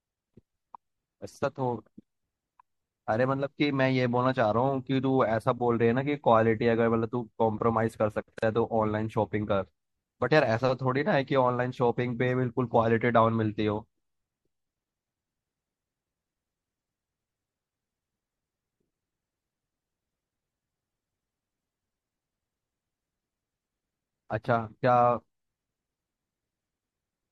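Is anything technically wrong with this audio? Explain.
Yes, two problems can be heard. Throughout the clip the speech sounds watery and swirly, with metallic chirps on s sounds and smeared consonant attacks. This is likely MP3 compression, and the plainly audible damage fits a low bitrate around 64 kbps. The encoder drops the treble above a fixed frequency and toggles weak components frame by frame. A spectrogram would show a flat ceiling across the top and flickering, patchy holes in the upper bands.

At 8.39 s the sound drops out for about 39 ms, until 8.43 s, then picks up exactly where it left off. This is a gap at a join of encoded pieces. Separately encoded segments were joined without trimming each run's start-up delay and end padding. The waveform shows a short flat line with smeared edges, and the spectrogram shows a thin vertical blank stripe.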